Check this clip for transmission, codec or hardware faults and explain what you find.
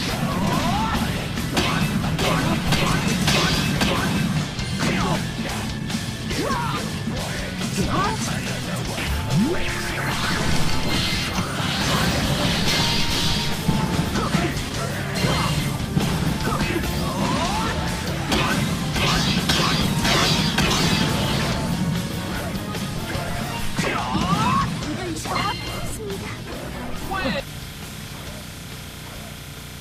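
Two transmission faults are present: one skip ahead and four stretches of jitter buffer speed-up.

At 5.15 s there is a skip ahead. Audio was discarded while later packets were already queued, so about 0.7 s of material is missing and playback jumps forward with no filled gap. The two sides of the cut butt together almost seamlessly.

Jitter buffer speed-up follows at 5.33 to 7.70 s (102%), then at 9.35 to 10.65 s, 14.66 to 18.28 s and 22.02 to 25.61 s (each 103%). The buffer had grown past its target and trimmed short pitch-period slices repeatedly, roughly a tenth of a second at most per stretch. The sound runs slightly quicker at unchanged pitch.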